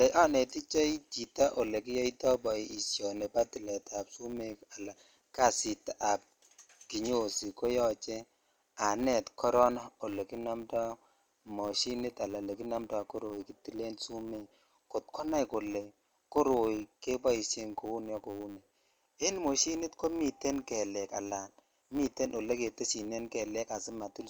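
From start to finish the speech has been through a lossy transform codec, most likely Bluetooth LC3 compression, working in 10 ms frames at a moderate rate that fits about 48 kbps. The encoder thins and noise-fills parts of the upper spectrum, so consonants and breath pick up a grainy, breathy edge, and voiced sounds lose some definition at the top. The damage is plainly audible throughout the clip.

Also running the whole length is a filter restarted on every block. It discards its internal state at each block boundary and begins again from silence, so every block opens with a small transient. Those restarts repeat every 10 ms, producing a steady 100 Hz buzz laid under the speech. The buzz rises and falls with the level of the speech, loudest on strong syllables and receding in quieter moments.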